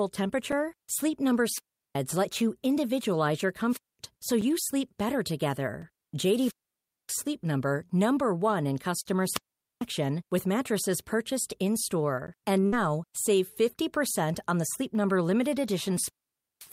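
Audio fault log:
0.52, 4.41, 5.82 and 12.27 s: block of digital silence. Four tiny holes where the sound drops straight to silence and comes back with no fade. They're short, 5 ms at 0.52 s and at 5.82 s (right after "sleep better"), about 7 ms at 4.41 s and 10 ms at 12.27 s, so they come across as ticks rather than gaps. That's the kind of thing you get when the output buffer isn't filled in time.
1.50–1.95, 3.69–3.99, 6.30–7.19, 9.20–9.87 and 15.92–16.72 s: wireless microphone squelch dropout. Each time the radio link fades, hiss swells, and then the receiver's squelch mutes the output, leaving near silence for roughly 370, 220, 580, 440 and 530 ms. Then the speech comes back. You hear it return on "let you individualize your" after the first one and on "with mattresses purchased" after the fourth. The last one runs to the very end of the clip.
9.01–9.07 and 12.60–12.65 s: short stall from a late packet. 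A packet turns up late, the jitter buffer empties, and the receiver holds the last sound until it arrives. It stretches about 39 ms at 9.01 s and 26 ms at 12.60 s, then carries on from the same spot. Nothing is lost, but the sound hangs a touch too long with a faint buzzy smear, and the timing slips slightly later each time.
12.67–12.74 s: burst of packet loss. Right on the heels of the second stall, about 60 ms of audio is lost outright. The receiver covers roughly 56 ms by continuing the last sound and fading it down, which gives a brief held buzz or dying hiss. Then the speech jumps ahead, and the bit in between is simply gone.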